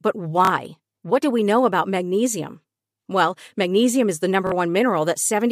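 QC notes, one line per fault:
0.45 to 0.50 s, Bluetooth stutter: about 46 ms of audio goes missing, which fits two lost packets. The receiver fills the gap by replaying its last short slice, producing a brief buzzy repeat before the sound jumps ahead. The waveform shows a repeating block, and the spectrogram shows vertical striping and a seam.
4.47 to 4.52 s, Bluetooth stutter: the same roughly 46 ms repeat-and-skip, right after "magnesium is the", with the same looped pattern and seam.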